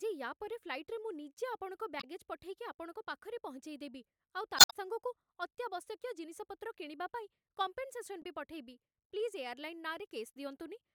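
Damaged data in the compressed stream makes the decoder misread frames and lose sync, so the speech breaks into brief glitches at 1.99–2.04 s, at 4.56–4.73 s after "ପାଖରେ ପହଞ୍ଚେଇଦେବି ଆଉ" (adding about 52 ms), and at 8.22–8.26 s just before "ବି ପଠେଇବି".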